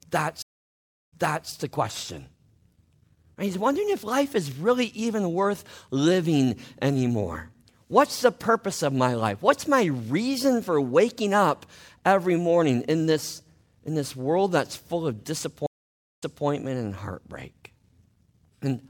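Stream reconnects break the speech twice. At 0.42–1.50 s the connection drops, leaving about 0.70 s of silence, a flat gap in the waveform and a blank vertical band on a spectrogram. A fresh decoder then resumes 0.38 s earlier than where the sound cut, so a fragment repeats before "the question". At 15.66–16.46 s, after "world that's full of", a 0.56 s gap follows, and playback picks up 0.24 s back, replaying a sliver before "and heartbreak".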